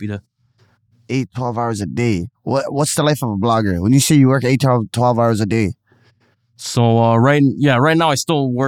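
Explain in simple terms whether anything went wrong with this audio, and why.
Nothing went wrong with this audio, and there is no fault to point to anywhere in the speech.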